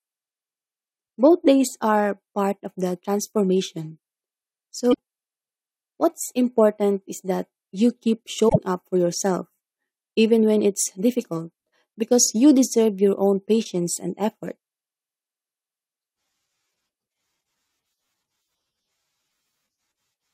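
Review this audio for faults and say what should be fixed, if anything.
Damaged data in a compressed stream shows up twice in this speech: a short fault from 4.90 to 4.96 s, and a longer burst from 8.45 to 8.56 s, right after "is that you keep". Corrupted bytes make the decoder misread frames until it finds the next valid header. Verify file integrity with checksums and retransmit or re-encode from a clean source.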